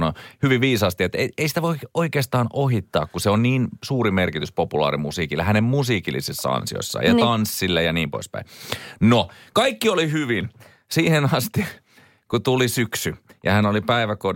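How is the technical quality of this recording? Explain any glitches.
No audible glitches or faults.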